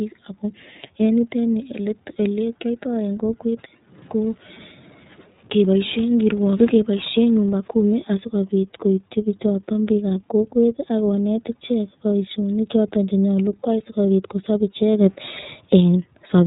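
Throughout, the speech sounds rough, slightly synthetic and band-limited, with nothing above 3.8 kHz. This is the iLBC codec coding each 30 ms frame independently, and the damage is plainly audible.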